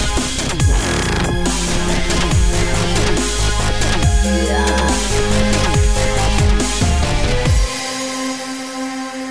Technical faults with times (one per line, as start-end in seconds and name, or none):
none